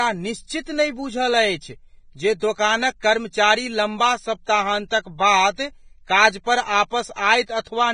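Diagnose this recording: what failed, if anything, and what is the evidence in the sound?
The speech sounds hissy and grainy throughout, with rough, smeared detail and nothing above 9.7 kHz. That points to the codec stage, likely Vorbis compression at a very low rate, near 21.5 kbps. Coarse treble quantisation turns fine detail into noise-like texture.

Pre-echo is audible as a brief hiss arriving just before sharp onsets at 2.40 s (23 ms), 3.00 s (25 ms) and 4.88 s (32 ms), softening each attack. The codec spreads each block's quantisation noise across the quiet moment before a late transient.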